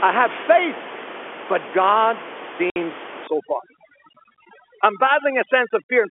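Packet loss filled with silence hits this telephone-band speech recording at 2.70 to 2.76 s. A 60 ms hole drops straight to nothing with hard edges, which fits three 20 ms packets going missing and the receiver playing silence instead of concealing the gap. Overdone noise removal runs from 3.27 s to the end. The room noise, sitting about 12 dB under the speech, is suppressed so hard that the background collapses into near silence with twinkling specks, and the quieter parts of the speech are gated away with it.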